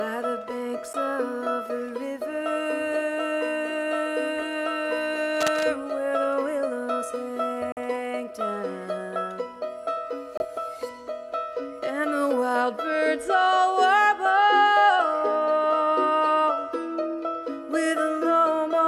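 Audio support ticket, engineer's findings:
Brief dropouts to silence at 0.93 s (8 ms), 7.72–7.78 s (47 ms) and 10.37–10.45 s (26 ms), resuming where it stopped. Likely Bluetooth stall: interference delayed packets, headphone buffer ran dry until resends arrived.

Scratchy, rustling burst at 5.37–5.68 s, roughly 10 dB under the signal. Likely cable scratch noise: worn cable or connector moved, contact resistance fluctuating rapidly.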